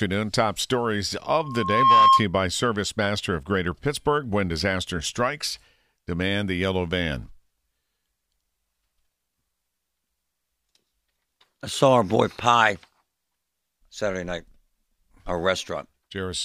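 At 1.39 s a loudspeaker feedback squeal starts in the speech. The microphone is hearing the loudspeaker it drives. At one frequency the loop returns more signal than it sends, so that pitch feeds itself. Here it is a single tone at 1.1 kHz. It swells over roughly half a second to around 10 dB above the speech. It ends at 2.26 s, just before "you by".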